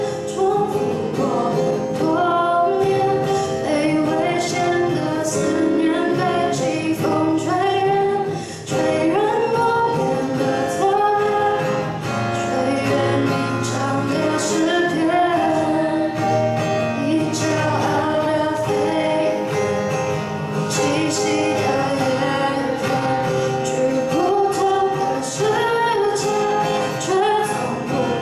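No technical faults can be heard anywhere in the recording, and the signal stays steady and intact throughout.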